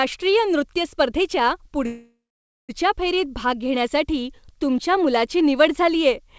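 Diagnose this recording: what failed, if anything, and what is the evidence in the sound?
The speech stops at 1.86 s, and the last sound is carried on as a fading buzz or hiss that drops into silence for about half a second before the talk resumes at 2.71 s, all under the band-limited G.722 sound, with nothing above 8 kHz. That's a call audio freeze at the network and jitter-buffer stage. Packets were likely held up in transit, so the buffer ran dry and the receiver filled the 0.83 s hole. Nothing got dropped; the speech just picks up where it left off, now running 0.83 s late.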